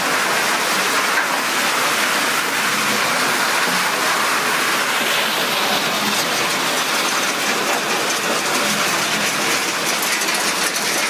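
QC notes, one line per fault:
Nothing stood out on listening.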